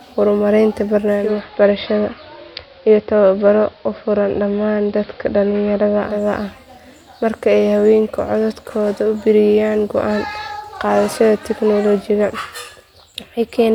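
From 1.1 s to about 6.3 s the audio drops into a digital radio blending to analogue episode, crossing over to the AM broadcast of the same station within 345 ms. On the AM side the treble is cut back, so the speech turns dull and narrow. A faint hiss sits well below the signal, roughly 35 dB down. Loudness stays matched across the switch, and the return to digital at 6.3 s restores the full treble.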